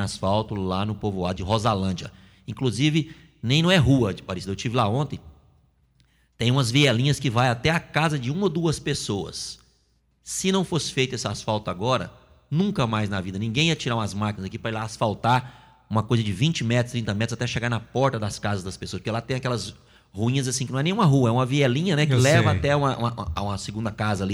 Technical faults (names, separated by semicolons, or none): none